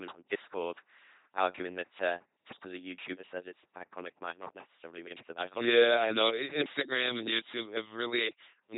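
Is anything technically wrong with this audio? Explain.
Yes, the whole clip has been through an LPC-10 vocoder. Each moment gets rebuilt from a short all-pole filter driven by either a pulse buzz or noise, so the speech comes out robotic and buzzy, band-limited below about 3.9 kHz, which fits a 2.4 kbit/s codec.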